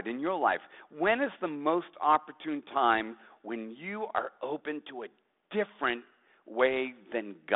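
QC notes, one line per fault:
No faults to note.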